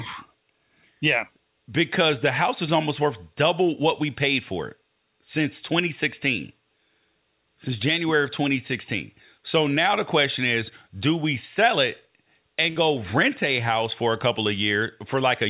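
At 12.7 s there is a burst of packet loss lasting to 12.78 s. Packets went missing and the receiver stretched the last sound for about 57 ms, fading it out. About 60 ms of speech is then skipped. Everything sits below 4 kHz, which fits a narrowband telephone codec.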